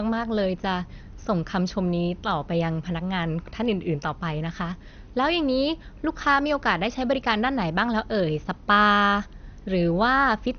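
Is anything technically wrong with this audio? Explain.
Yes. Throughout the speech, the sound is dull and nothing is present above 6.5 kHz, with a gurgling, granular roughness riding on it. This is likely MP2 compression at a low rate, consistent with roughly 48 kbps. The encoder had too few bits, so it shut off upper sub-bands entirely and quantised the remaining ones coarsely. On a spectrogram, energy stops at a hard ceiling near 6.5 kHz, and blocky patches flicker on and off below it.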